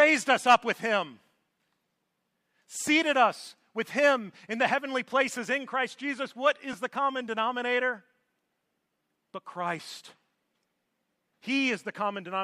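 Lost LE Audio frames at 6.73 s: a brief dropout of about 10 ms, consistent with one lost frame of the likely LC3 stream. The decoder filled the gap by repeating the previous spectrum with scrambled phase, so the speech blurs into a tiny noisy smear.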